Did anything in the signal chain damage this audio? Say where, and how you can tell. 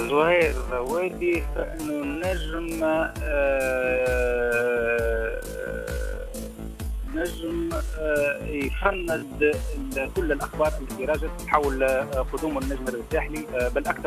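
Yes. From the start to 9.84 s the audio plays at roughly half pace, 0.54 times normal speed, dragging while pitch holds steady, then snaps back to normal pace. This is likely a time-stretched section, where software lengthened the audio by repeating short pieces.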